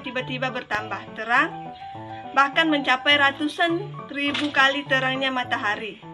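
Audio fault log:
0.75–0.77 s, loud pop: a single sharp pop lasting about 20 ms, peaking roughly 15 dB above the surrounding sound, which carries on uninterrupted beneath it. The cause is likely a sudden voltage step or pulse entering the signal chain, such as a plug or switch transient, static discharge or a driver glitch. The circuitry downstream shapes that pulse into a brief, hard-edged burst, which is heard as the abrupt click-thump at this point.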